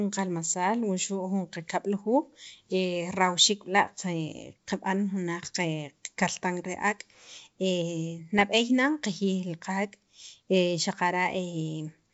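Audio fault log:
8.39–8.45 s, bit errors on an ADPCM link: a short rough burst with a pop and a quick wobble in level, lasting about 60 ms, from a light sprinkling of flipped bits somewhere around a third of a percent. Each bad bit throws off the decoder's step size and prediction, so the damage smears on for a few milliseconds instead of staying a single click. The G.722 wideband coding around it is clear, with little or no codec roughness.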